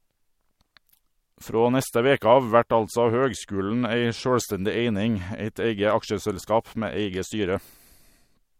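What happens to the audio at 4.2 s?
Nothing goes wrong at 4.2 s; the speech carries on intact through that moment, with no dropout, click or distortion.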